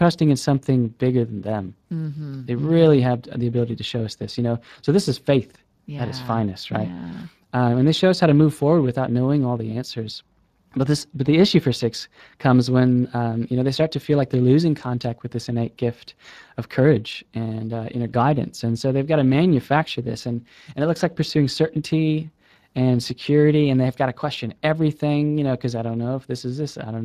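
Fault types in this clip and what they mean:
Speex codec: the speech sounds plainly noisy and hoarse throughout, from a CELP speech codec short of bits for the excitation, fitting roughly 22 kbps.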